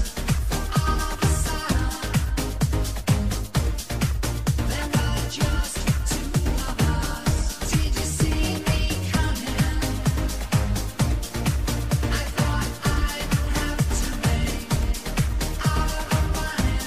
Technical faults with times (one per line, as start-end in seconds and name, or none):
15.59 dropped samples